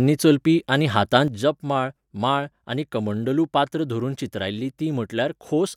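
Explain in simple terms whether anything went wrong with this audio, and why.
Yes, something went wrong: a sudden gain jump, likely from a volume setting being changed instantly instead of gradually. At 1.28 s the speech and its background noise both drop abruptly to a noticeably quieter level together, and they stay there until the end.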